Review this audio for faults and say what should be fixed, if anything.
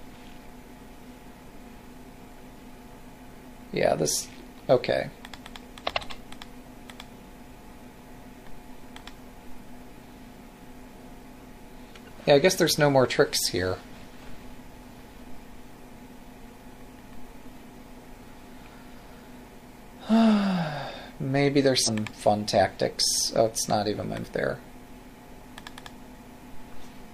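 Damaged data in a compressed stream at 21.83–21.89 s and 24.20–24.25 s: corrupt frames are misdecoded while the decoder resyncs. Checksummed transfer and error-checked storage would prevent it.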